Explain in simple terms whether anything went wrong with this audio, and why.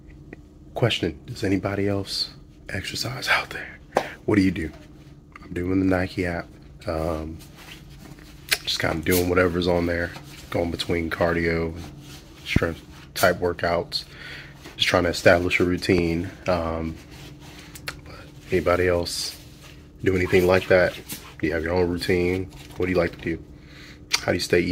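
Two loud pops break into the audio, at about 12.56 s and again at 15.98 s. Each is a single sharp thump lasting only a couple of hundredths of a second, the first noticeably stronger than the second. The likely cause is a sudden jolt of electricity, such as a plug, switch or static discharge, added to the signal. Unlike a dropout, nothing goes missing: the sound carries on underneath each pop.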